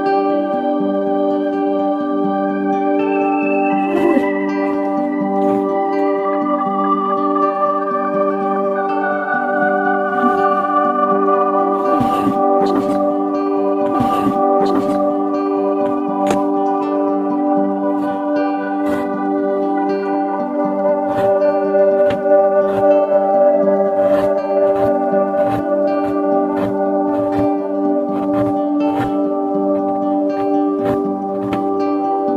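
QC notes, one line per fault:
13.93–15.93 s, stream segment repeated: about 2.0 s of the programme plays a second time after a small blip at the jump back, because the player queued the same segment twice.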